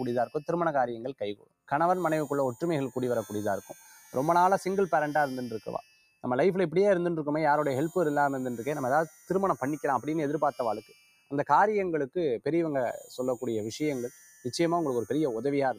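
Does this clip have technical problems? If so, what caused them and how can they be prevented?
Yes. Throughout the clip the level pumps and thins, swinging by roughly 5 dB as held material and tails sink while attacks pass. This is a noise suppressor applied to music or sounds: a speech-tuned suppressor treating steady tones and ambience as noise.

Sharper dips, where sound is cut by the noise suppressor, occur at 0.26–0.42 s (about 17 dB), 1.13–1.71 s (about 21 dB), 5.82–6.24 s (about 16 dB), 9.1–9.3 s (about 9 dB), 10.81–11.32 s (about 15 dB) and 14.1–14.45 s (about 12 dB). In each, the suppressor judged the sound noise and pulled it down more than the rest.

To prevent this, disable speech noise suppression, or switch to a music mode, whenever the source is not speech.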